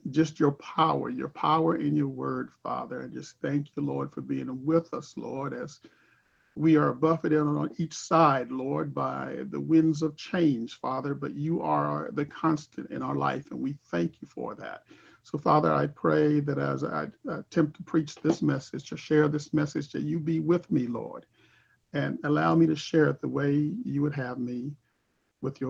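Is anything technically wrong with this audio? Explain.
Yes. Three gaps have comfort noise in place of the background: 6.21 to 6.55 s, 21.83 to 21.91 s, and 24.91 to 25.41 s. The background sits about 52 dB below the loudest sound. In each pause, the true room tone gives way to smooth, featureless hiss. The first patch is about 3 dB louder, the second about 2 dB quieter, and the third matches. The likely cause is Opus discontinuous transmission, with the receiver synthesising noise while the sender stays silent.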